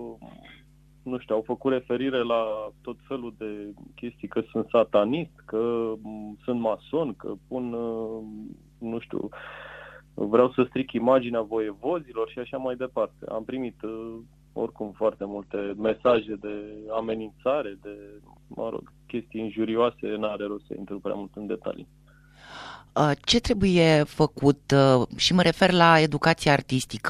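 An adaptive stream at a lower bitrate takes over from 15.18 s to 17.18 s. The player switched to a lighter version of the stream for two seconds, most likely because the connection slowed, and the change lands abruptly with no gap. Nothing above about 8.2 kHz survives, so the top end goes dull and codec artefacts thicken. The shift from full quality to thin and smeared points to a drop from roughly 64 to 16 kbit/s.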